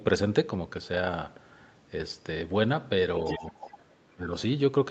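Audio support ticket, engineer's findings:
Other side's voice leaking through, 3.25–3.4 s. Likely residual echo: canceller failed to subtract loudspeaker playback from mic signal. Brief second voice at roughly 10 dB below near-end speech, under the main talker.

Speech suppressed in double talk, 3.38–4.33 s. Likely canceller misjudging overlap as echo and attenuating mic path. Near-end level drops, deepest around 20 dB, about 0.7 s affected in total. Band-limited to 8 kHz via Opus path throughout.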